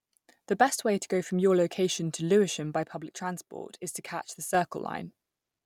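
From 2.83 to 4.55 s the speech steps down about 6 dB at once, likely one channel dropping out; a fade would slide, not jump.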